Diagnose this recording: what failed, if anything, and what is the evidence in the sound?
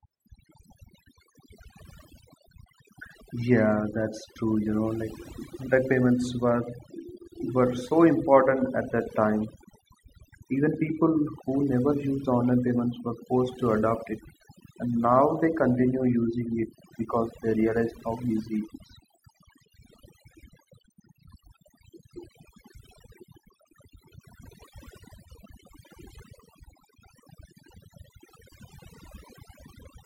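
Overdone noise removal runs throughout the speech, a fault in the call-processing stage, where a noise suppressor was set far too aggressively. Between phrases the background collapses to near silence with twinkling specks. The suppressor pushes individual frequency bands down or off whenever they sit close to its noise estimate, and the quieter parts of the speech fall under that threshold and are removed along with the noise.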